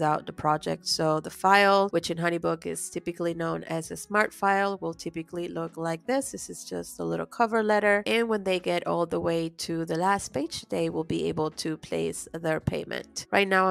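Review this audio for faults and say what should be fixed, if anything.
Nothing stood out on listening, so there is nothing here that needs fixing.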